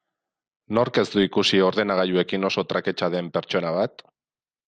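From start to finish the speech sounds dull, with a gurgling, granular roughness and upper bands flickering in and out. This is likely MP2 compression: starved of bits, whole high sub-bands switch off and the rest are coarsely quantised, which fits roughly 80 kbps.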